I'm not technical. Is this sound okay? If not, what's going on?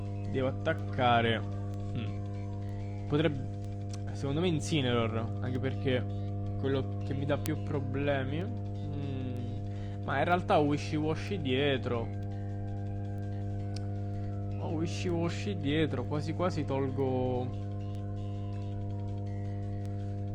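No. Two separate problems are mixed into the sound.

The first is mains hum. The recording equipment picked up electricity from the power supply, through a ground loop in the cabling or a nearby transformer. That adds a steady low buzz at 50 Hz. It runs from start to finish and is roughly as loud as the sound you actually want, so it is hard to ignore.

The second is word clock ticks. Two pieces of digital gear were passing audio between them, but each kept time with its own clock, and the clocks disagreed very slightly, by a tiny fraction of a percent. Every time one clock drifted a full step past the other, a single sample was lost or doubled. You hear this as a short, sharp tick about once a second, roughly twenty in all, between 0.79 s and 19.86 s. Some ticks are sharper than others.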